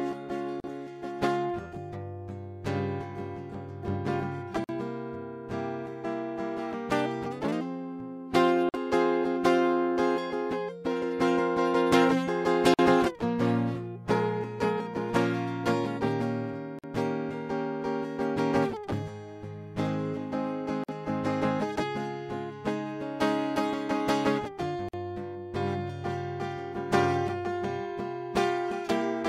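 The music was encoded in separate pieces about 4 seconds long and joined without trimming, so each encoder's start-up delay and last-frame padding survive as a gap at a join of encoded pieces. Silence drops into continuous sound at 0.60 s for about 40 ms, then for 49 ms at 4.64, 8.69, 12.74, 16.79, 20.84 and 24.89 s. Each dropout has smeared edges, and the music resumes exactly where it stopped.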